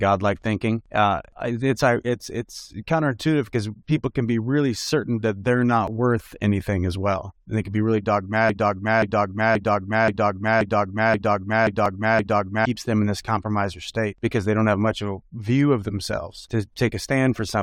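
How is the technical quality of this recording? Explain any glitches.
The recording has two kinds of glitch: brief skips at segment joins, and a long stretch where a short fragment loops.

Overlap between stream segments at 5.88 s (after "certain that that they're") and 11.86 s: overlapping segment timestamps get trimmed, dropping milliseconds of sound and producing tiny skips. The spacing fits 6-second segments.

Broken-record loop from 8.49 to 12.65 s, after "they can be really": a 0.53 s fragment repeats eight times before "them in this compromiser". This was likely a stalled stream resending its last buffer, so the original audio is lost.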